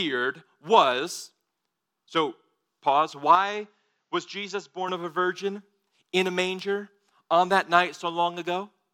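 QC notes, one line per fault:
3.35–4.88 s, input switched to a poorer device: the recording likely jumped to a lesser microphone just after "so pause", until "of a virgin in"; with no gap at the switch, speech abruptly loses everything above 7.6 kHz, turns duller, drops about 5 dB, and gains faint new background noise.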